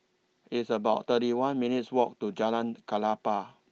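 Nothing in this speech recording stood out as a problem on listening.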